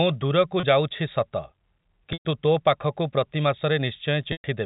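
At 0.6 s there's a brief 30 ms gap, packet loss with pitch repetition, heard as a slightly held, buzzy bit of voice as the receiver loops the last pitch period, which fits one lost packet. At 2.13 s a 120 ms dropout, about four packets' worth, fades toward silence before "ତୋ ପାଖକୁ ପ୍ରତି" cross-fades back in. The same 120 ms fade-out hits at 4.32 s, all over the narrowband G.711 telephone sound.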